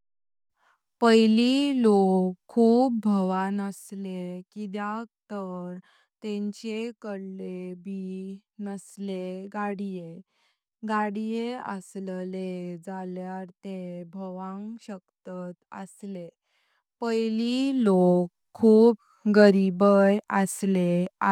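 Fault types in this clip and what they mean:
Zipper noise: A level change of about 10 dB that is not smoothed but applied in small discrete jumps, around 15 per second, each leaving a tiny click. It rides on the speech from 16.60 to 18.11 s, between "तेत भावांग शकतात असले" and "खूप गरीबय", as a fine ticking. On a waveform the envelope looks like a staircase. On a spectrogram, faint evenly spaced vertical lines run across the band.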